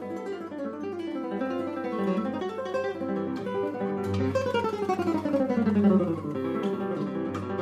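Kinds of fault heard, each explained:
No technical faults can be heard in this audio. There is nothing here that calls for an explanation.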